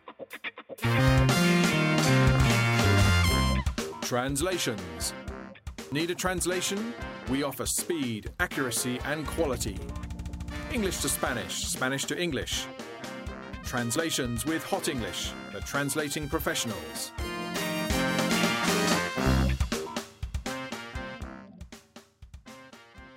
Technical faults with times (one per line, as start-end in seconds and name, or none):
2.86 dropped buffer (overrun)
5.92 dropped buffer (overrun)
13.96 dropped buffer (overrun)